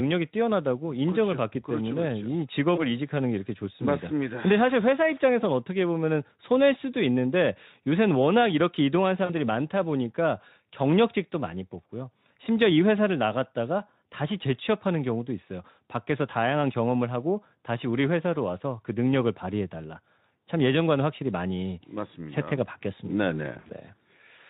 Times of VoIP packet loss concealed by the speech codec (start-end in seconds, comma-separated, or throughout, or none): 2.75-2.89, 9.26-9.34, 23.54-23.71